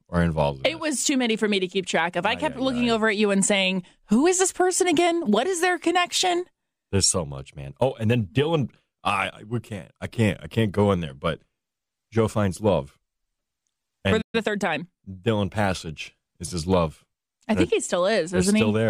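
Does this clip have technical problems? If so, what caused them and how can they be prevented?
Yes. At 14.21 s the speech cuts to silence until 14.35 s, a playback stall of about 120 ms, most likely because the player's buffer ran dry or its thread was blocked. It differs from a dropout because the output simply goes silent until the player recovers, then the speech carries on. A larger playback buffer or a higher-priority audio thread would prevent it.

From 14.35 to 14.83 s the speech runs about 1.25 times fast at unchanged pitch. This is time-compressed catch-up: the player trims and cross-fades small slices to absorb the backlog. Unlike a resampling speed-up, the pitch does not rise. Preventing the stall removes the need for it, and a gentler catch-up rate would make it less audible.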